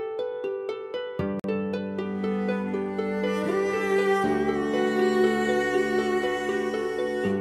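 A Bluetooth stall at 1.40 to 1.44 s drops the sound into 46 ms of silence before playback resumes, likely because interference delayed packets and the headphone buffer ran dry.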